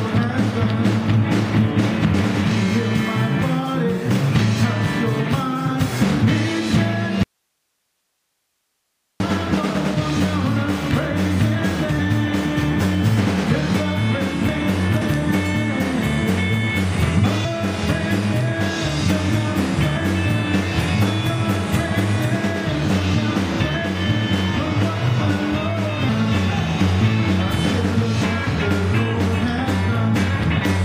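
The audio has an audio dropout to a faint residue from 7.23 to 9.2 s: the sound cuts abruptly to hiss roughly 55 dB down for about 2 s, likely from a signal lost upstream while the path stayed live, unlike a fade or pause. Damaged data in a compressed stream shows up as brief chirps, squawks, clicks or tiny holes at 11.98 s, 15.00 s, 17.44 to 17.46 s and 26.08 s, each only tens of milliseconds long, where the decoder misread frames and resynchronised.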